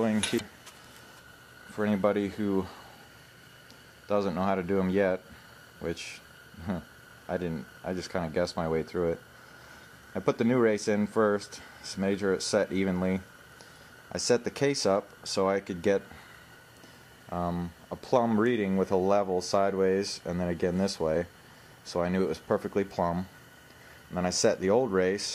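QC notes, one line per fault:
0.35–0.41 s, damaged data in a compressed stream: a short glitch where the decoder hits corrupted frames, loses sync and hunts for the next valid header.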